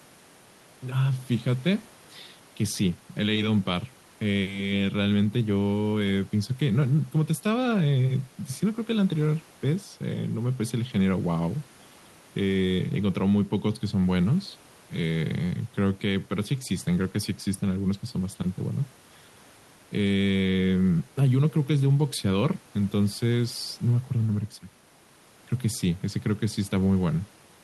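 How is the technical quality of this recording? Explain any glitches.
Nothing stood out on listening to this speech recording, apart from a faint room noise sitting about 31 dB below the speech.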